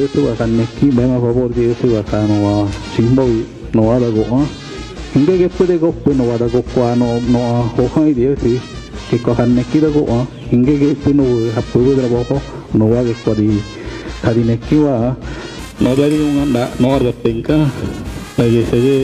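From 15.59 s to the end at 19.04 s, periodic clock jitter sets in: interference wobbles the converter's sampling clock at around 3 kHz, placing sidebands that far above and below every component. Higher frequencies suffer most, giving the sound a rough, metallic edge.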